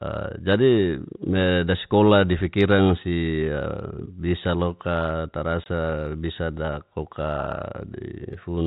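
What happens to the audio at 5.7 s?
A single lost packet was replaced by silence, packet loss filled with silence, cutting a 20 ms hole with hard edges from 5.64 to 5.66 s, just after "si a bisa loka".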